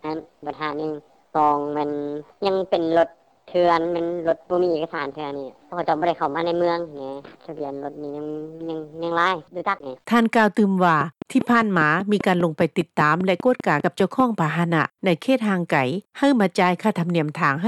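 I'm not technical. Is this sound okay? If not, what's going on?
No. A train of clicks runs from 11.01 to 14.21 s: about fifteen evenly spaced ticks, five per second, sitting on top of the sound and loud enough to stand out. It's likely interference from nearby equipment or a faulty connection or power supply.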